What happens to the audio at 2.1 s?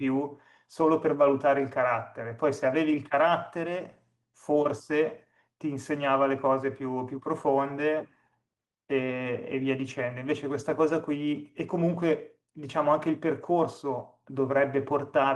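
Nothing goes wrong at 2.1 s: the speech there comes through intact, with no dropout, glitch or distortion beyond the ordinary coding of the call path it travelled over.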